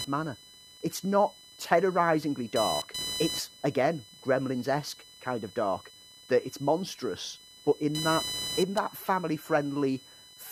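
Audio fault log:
Throughout, computer activity noise. A buzzing, chirping layer sits under the speech for the whole clip. Its pulses repeat at around 1 kHz, which gives it a whiny, electrical edge. It runs roughly 15 dB below the speech. It comes from the computer's changing load on the processor, graphics or mouse disturbing the ground the audio circuit shares. So it tracks machine activity, not the speech.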